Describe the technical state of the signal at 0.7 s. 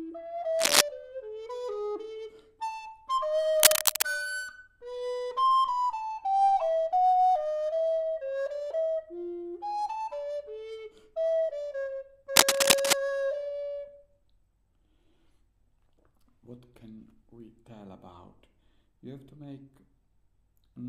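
At 0.7 s there is cable scratch noise from 0.59 to 0.81 s: dense, uneven rustling roughly 10 dB above the sound, likely a worn contact being moved. It is unlike isolated clicks.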